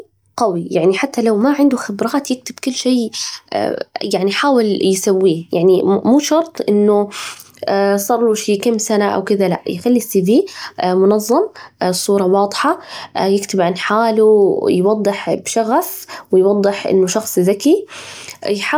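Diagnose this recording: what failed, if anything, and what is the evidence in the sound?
Nothing failed; no fault can be heard anywhere.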